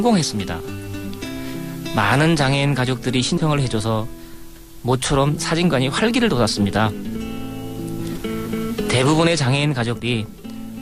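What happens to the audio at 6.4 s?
Nothing goes wrong at 6.4 s: the audio plays through that moment with no dropout, click, glitch or other fault.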